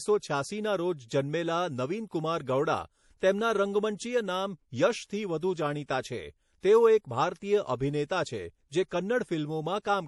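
Throughout the speech, the sound is plainly watery and swirly with nothing above 11.5 kHz, likely from MP3 compression at a low bitrate, around 48 kbps. At 6.60 s and 8.88 s, pre-echo puts a short hiss about 29 ms ahead of sharp attacks, because the codec spreads quantisation noise across each block and into the quiet before the attack.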